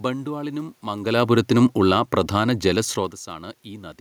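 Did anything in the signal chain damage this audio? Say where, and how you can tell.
Yes: call processing, automatic gain falling, 1.0–2.91 s. Speech and room noise sink together by about 3 dB as the gain control backs off.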